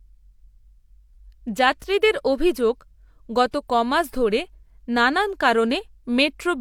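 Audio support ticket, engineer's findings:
Listened through the speech recording and found nothing to flag; no faults to report on this one.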